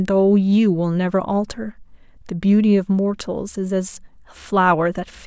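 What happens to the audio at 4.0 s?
Nothing goes wrong at 4.0 s; the speech there plays through intact, with no dropout, click or distortion.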